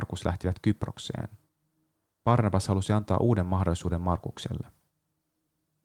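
No technical faults are audible.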